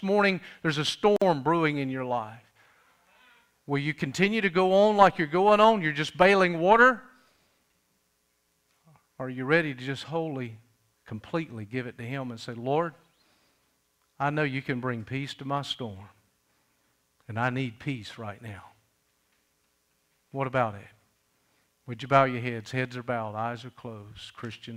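At 1.16 s the sound drops out for about 51 ms, a short silence with smeared edges, then resumes where it stopped. This is a gap at a join of encoded pieces: separately encoded segments were joined untrimmed, leaving encoder delay and final-frame padding in place.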